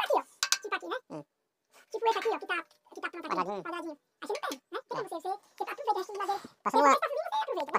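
The audio plays back at twice its proper speed and sits a full octave high, 12 semitones up, for the whole clip. This is audio read two samples at a time. The reader treats each pair of samples as one frame, as if the data had two channels or samples twice as wide.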